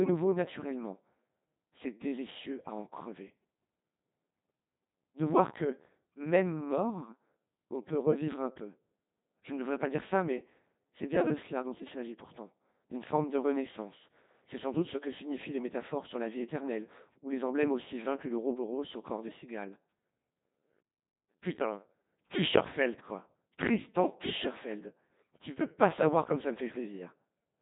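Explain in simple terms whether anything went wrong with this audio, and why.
A Codec 2 vocoder rebuilt the speech from a rough sketch, so from start to end it sounds heavily robotic and buzzy, with nothing above 3.8 kHz.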